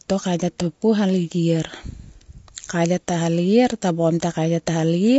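From start to finish the speech sounds rough and grainy, with noise between harmonics, likely low-delay AAC compression squeezed to around 32 kbps.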